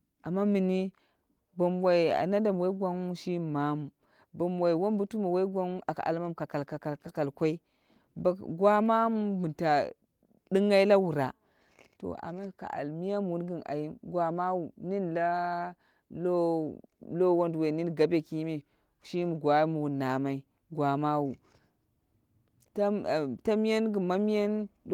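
No faults heard in the speech; the Opus voice compression is running in hybrid mode with full bandwidth reaching about 20.4 kHz and only light coding traces, which fits a rate around 24 kbps.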